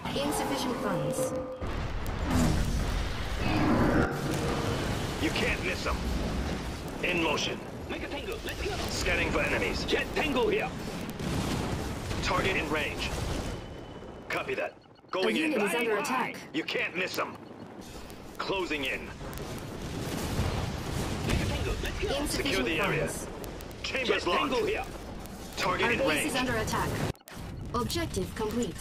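The audio carries word clock ticks from 0.11 s to 28.80 s. Sharp ticks of uneven strength repeat about every 0.02 s, roughly fifty a second, so they merge into a rattling buzz. An unlocked receiver clock drifting around a thousand parts per million would drop or repeat one sample at each slip.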